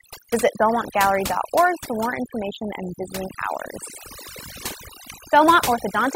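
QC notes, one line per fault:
Throughout, overdone noise removal: the background drops to near silence scattered with twinkling specks. Noise reduction set far too strong pulls individual frequency bands down whenever they sit near its noise estimate, stripping quieter parts of the speech along with the noise.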